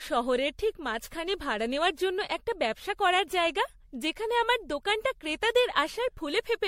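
Generation loss runs through the whole speech clip. Nothing is heard above 16.5 kHz. The sound has a swirly, hollow character, more smeared than one encode at this quality would give. Consonant attacks blur and lose their edge. Added coding noise sits under the voice. The likely cause is repeated lossy coding: decoded and re-encoded around seven times, which fits MP3 at about 66 kbit/s. Each pass requantised on a shifted frame grid, so the errors piled up.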